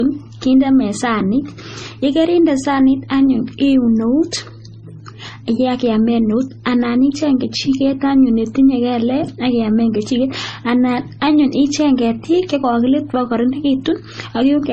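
Speech all the way through, with stacked artefacts that point to transcoding between lossy codecs, likely MP3 into low-bitrate AAC and back to MP3. Each pass re-encoded the previous one's damage and added its own, and nothing survives above 9 kHz.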